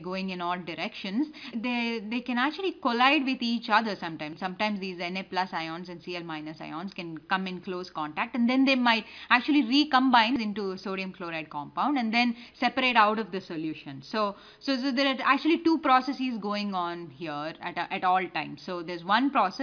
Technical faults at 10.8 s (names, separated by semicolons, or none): none